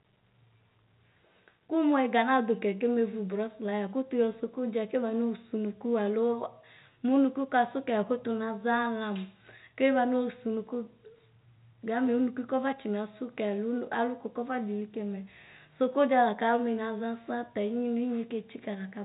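No faults found: telephone-band speech over G.711 coding, with nothing above 3.8 kHz as that path requires.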